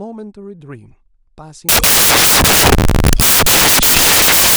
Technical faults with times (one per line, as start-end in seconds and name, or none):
1.69-4.57 samples built from the wrong bytes